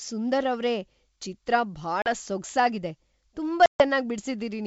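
Right after "ಅವ್ರೇ ಚಿತ್ರ", at 2.02 to 2.09 s, there's packet loss on the ADPCM call: 40 ms of audio, a couple of packets' worth, drops to a hard-edged silent gap. The decoder's predictor and step size lose sync with the sender, so the sound comes back slightly distorted before settling. A bigger hole follows at 3.66 to 3.83 s, 140 ms gone, roughly seven packets, on wideband G.722 coding that sounds like its full 64 kbit/s mode.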